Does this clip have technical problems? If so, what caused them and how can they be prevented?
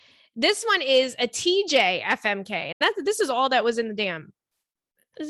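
Yes. A Bluetooth dropout silences the speech from 2.72 to 2.81 s, just before "that's this is all", likely because about four packets arrived too late. Playback resumes as if it had continued underneath. The waveform shows a flat gap, and a spectrogram shows an empty vertical band across all frequencies. Keeping the source device close, with a clear line of sight and less 2.4 GHz congestion, prevents it.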